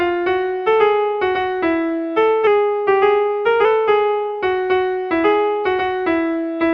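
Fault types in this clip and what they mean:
Drift correction step: software reconciling two clocks likely lowered the playback rate in one jump to rebalance its buffer, so the material runs 6.4% slow from 2.47 s to 3.65 s. Speed and pitch fall together, a drop of 114 cents, a little more than a semitone, making everything in that stretch sound sluggish and detuned flat. At 3.65 s the rate snaps back to normal and the pitch returns abruptly.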